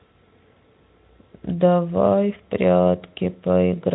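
Listening to the speech recording, nothing stood out as a technical problem.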